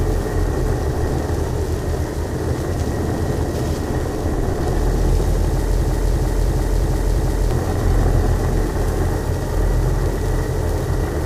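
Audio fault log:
5.80–7.51 s, system hang loop: the system froze while the sound hardware kept replaying its ring buffer, so one 341 ms piece, which fits a 16384-sample buffer, repeats exactly five times at 2.93 Hz, and about one and a half seconds of audio are lost.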